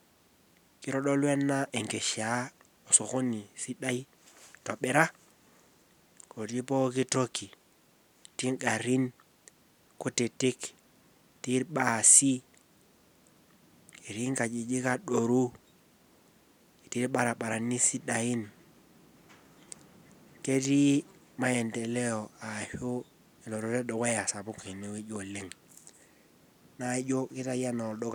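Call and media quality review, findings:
Nothing to flag on this speech recording: no dropouts, glitches or level problems turned up anywhere, so there's nothing here for the ticket.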